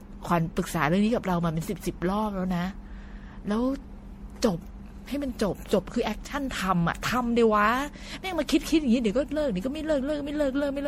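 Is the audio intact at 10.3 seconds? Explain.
No. At 10.3 seconds the speech has the swirly, hollow, smeared character that runs through the whole clip, with blurred consonant attacks and no content above 16.5 kHz. This is generation loss, likely from around ten rounds of MP3 decoding and re-encoding at a rate that sounds like about 64 kbit/s. Each pass quantised the signal again on a shifted frame grid, so noise and spectral gaps built up beyond what that single bitrate would cause.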